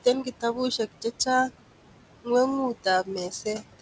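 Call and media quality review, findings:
Noise suppressor artifacts, throughout: room noise, sitting about 14 dB below speech, pulled down about 18 dB in gaps and returning under speech.

Speech cut by the noise suppressor, 3.3–3.81 s: roughly a tenth of a second of soft speech detail treated as noise, attenuated up to about 16 dB, sounding swallowed. Band limit at 8 kHz fits a wideband G.722 path.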